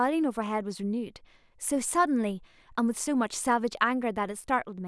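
Listening to this speech recording, nothing stood out as a technical problem.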